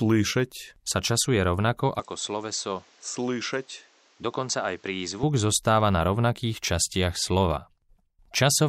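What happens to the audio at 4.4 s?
At 4.4 s the sound is inside a stretch from 2.00 to 5.23 s where it turns dull and boxy. Nothing above 8 kHz gets through. The level drops by roughly 5 dB, and a fresh background noise sits around 30 dB under the signal. There is no gap at either boundary. This points to an input switched to a poorer device. The likely cause is the system changing to a narrower-band microphone or headset profile, then changing back.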